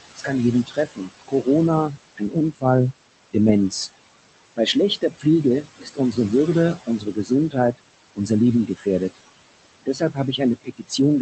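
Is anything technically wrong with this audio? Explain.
Yes, two related problems, both from the noise suppressor.

Noise suppressor artifacts run through the whole clip. The suppressor pulls down whatever bands it reads as steady noise, by about 18 dB, frame by frame. The room noise, about 12 dB under the speech, dips between phrases and comes back underneath them.

Speech cut by the noise suppressor shows up from 0.16 to 2.64 s, 4.57 to 6.17 s, 6.77 to 9.19 s and 9.86 s to the end. The suppressor mistakes quieter parts of the speech for noise and ducks them, by up to about 20 dB (about 16 dB in the second stretch). In the first span that adds up to around a second. Endings and soft consonants sound swallowed. The call codec's top end stops around 8 kHz, which fits an Opus wideband stream at about 24 kbps.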